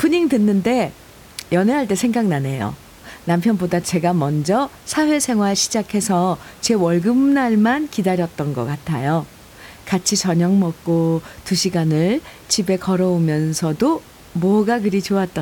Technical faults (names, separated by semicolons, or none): none